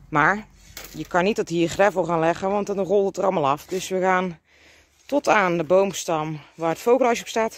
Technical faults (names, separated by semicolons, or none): none